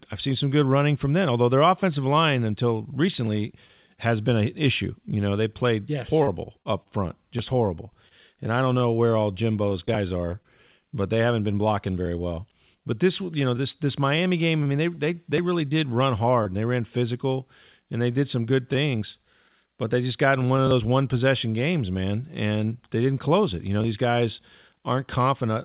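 From 6.18 to 6.89 s, between "know they played yes" and "front just horrible", there is repeated packet loss (robotic sound). Four gaps fall close together. About 60 ms of audio is missing, the longest hole is 35 ms, and 92 ms is filled by stretching the preceding sound, about 13% of the span. The result is choppy, with pieces missing. On a spectrogram, harmonic stripes freeze into flat horizontal smears at each patch. The waveform shows short runs of copied cycles with abrupt joins.

Scattered short gaps come next, from 8.09 to 10.46 s ("front just horrible" to "but they haven't been") and from 13.57 to 16.47 s ("this you know" to "and they ran physical"). The first stretch has around five isolated losses and the second about seven, none much longer than 20 ms. They are patched by continuing the last sound, with concealment covering only a few percent of each span. They are heard as brief ticks and hiccups. 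Each shows as a thin vertical seam or small smear in the spectrogram and a slight discontinuity in the waveform. Throughout the clip, the spectrogram is empty above 4 kHz, which is consistent with the narrowband call codec the audio passed through.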